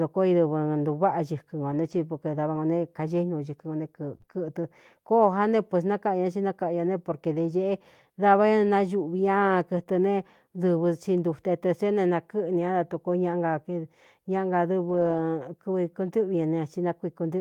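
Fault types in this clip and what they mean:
Scattered short gaps, 1.71 to 4.35 s: about three brief holes, none much over 20 ms, drop 60 ms of speech in total. The receiver covers each by extending the preceding sound, leaving small ticks or smears across roughly a fifth of a second of patched audio.
Lost packet rebuilt from error correction, 9.79 s: one 20 ms packet went missing. The following packet carried a low-bitrate backup copy, so the decoder played that instead. There is no gap, just a moment of rougher, noisier speech.
Short concealed packet loss, 9.83 to 9.87 s: 20 ms never arrived in time, and the receiver invented 17 ms to bridge it by continuing the last sound's pitch or noise before blending back. The result is a quick wobble or smear just after the previous fault.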